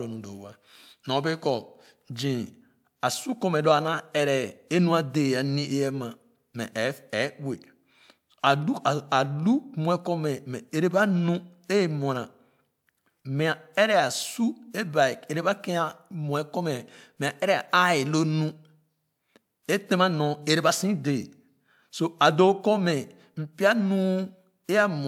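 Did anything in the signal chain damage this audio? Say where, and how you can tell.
No, no signal-chain damage detected.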